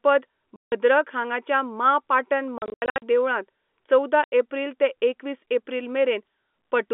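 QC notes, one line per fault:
0.56 to 4.32 s, packet loss filled with silence: the sound drops to dead silence from 0.56 to 0.72 s (160 ms), in scattered holes between 2.58 and 3.02 s (280 ms lost, longest gap 80 ms), and from 4.24 to 4.32 s (80 ms). Every gap length fits 20 ms packets. No concealment fills the gaps, so their edges are abrupt, unlike smoothed or repeated-sound dropouts. The 200 Hz to 3.5 kHz telephone band continues around them.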